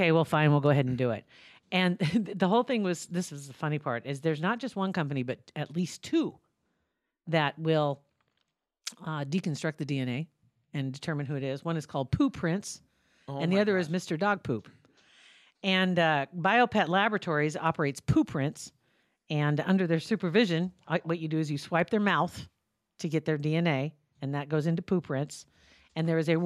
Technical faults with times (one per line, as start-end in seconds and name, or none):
none